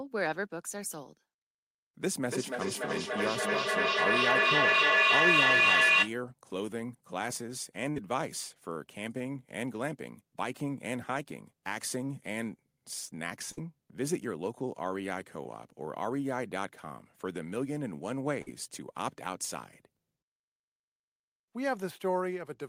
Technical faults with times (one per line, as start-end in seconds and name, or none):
2.26-6.19 feedback echo between two devices
7.90-7.97 burst of packet loss
13.52-13.58 burst of packet loss
18.42-18.48 burst of packet loss